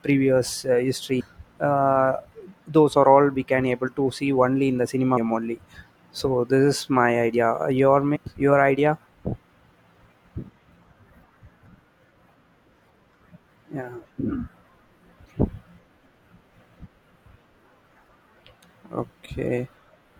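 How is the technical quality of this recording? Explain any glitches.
Four brief glitches break up the speech, caused by damaged data in a compressed stream.

The first comes at 1.19 to 1.21 s, right after "previous uh". The second is at 5.16 s, between "only in the cinema" and "only so". The third is at 8.15 s, just before "your idea". The last is at 14.04 s.

Each lasts about 15 to 20 ms. At each point, corrupted bytes made the decoder misread a frame and lose sync. It then searched for the next valid frame header.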